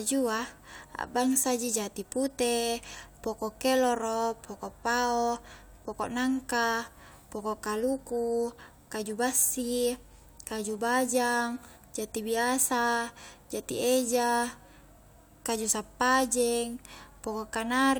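Nothing in this speech recording gives any sign of a technical fault, so there's nothing here to point out.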